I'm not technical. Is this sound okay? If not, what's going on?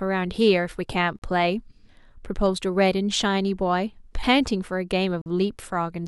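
No. The speech drops out twice, very briefly. At 1.19 to 1.22 s there is a hole of about 35 ms, and at 5.22 to 5.26 s one of about 45 ms. Each sounds like a tiny, sharp-edged click of silence. This is a gap between stream segments. The audio arrives in chunks, and two chunks don't quite meet, so the player fills the space with silence. The two holes are about 4 s apart, which fits 4-second chunks. Nothing is missing. Extra silence is added.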